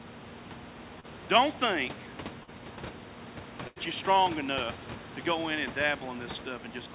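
At 1.0 to 1.05 s and again at 2.43 to 2.49 s, short concealed packet loss occurs: about 40 ms of audio failed to reach the decoder in time, and the receiver bridged each gap by extending the preceding sound before crossfading back. Each event is heard as a brief smear or wobble.

From 3.67 to 3.78 s, a burst of packet loss drops about 80 ms in a row. The receiver sustains and fades the last sound for roughly 86 ms, giving a held buzz or dying hiss, then resumes with that stretch missing, over a band that stops at 4 kHz.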